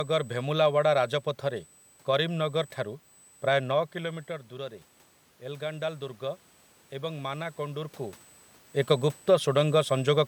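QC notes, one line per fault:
Throughout: USB whine, a fixed 8 kHz tone sitting roughly 30 dB below the speech. The pitch matches the 125-microsecond microframe rate of a USB bus, whose current draw leaks into the audio path through shared power or ground, so the tone never drifts.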